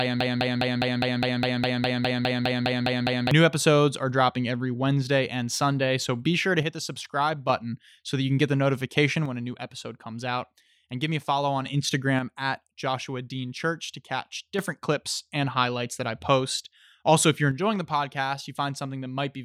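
Broken-record loop, from the start to 3.31 s: a 205 ms fragment of speech, already repeating when the clip opens, plays back to back about 15 times, likely from a stalled stream resending its last buffer. One channel drops out at 6.63–7.49 s, 9.26–11.66 s, 12.19–14.59 s and from 17.51 s to the end. The level falls abruptly by about 6 dB, likely because one stereo channel was lost before the mono sum.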